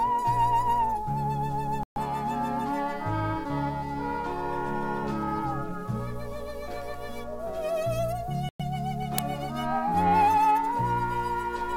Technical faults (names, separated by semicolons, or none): Bluetooth dropout; uninitialised buffer